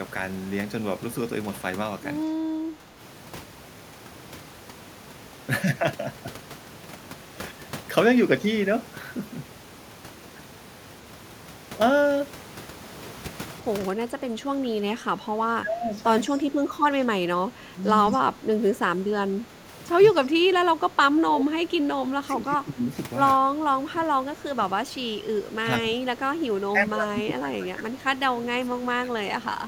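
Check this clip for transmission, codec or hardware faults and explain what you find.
Two echo-canceller faults affect this speech recording; the steady room noise, about 17 dB below the speech, belongs to the recording.

Speech suppressed in double talk at 2.31–2.99, 13.88–15.93, 16.37–17.09, 17.43–19.65, 20.13–22.89, 23.9–27.93 and 28.33–29.14 s: the voice dips by roughly 10 to 15 dB, likely because the canceller mistook overlapping talk for echo. Unlike dropouts, the level sags rather than vanishing.

Echo leak at 16.29–16.39 s: a faint delayed copy, about 30 dB down and 190 ms late, likely uncancelled loudspeaker pickup. Unlike reverberation, it is a distinct repeat.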